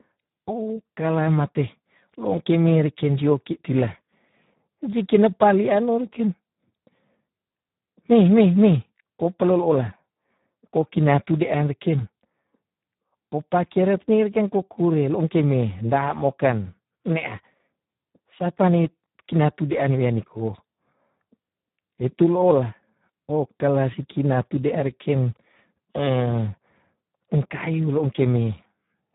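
From start to end the speech carries heavy Speex codec damage, consistent with a setting around 8 kbps. With so few bits for the excitation, voicing turns hoarse and noisy, and nothing survives above 3.8 kHz, leaving the sound muffled and narrowband.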